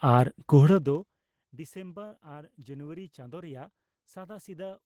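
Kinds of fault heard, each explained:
zipper noise: From 0.66 to 1.17 s, the speech level falls by roughly 25 dB in 2 dB jumps, about 30 per second, instead of a smooth fade. Each unsmoothed jump puts a small click into the waveform, so the fade carries a fine ticking rasp.
short concealed packet loss: At 2.07 to 2.14 s, about 40 ms of audio failed to arrive, and the receiver covered 38 ms of it by extending the preceding sound before blending back into the real signal. The speech shows a brief smear.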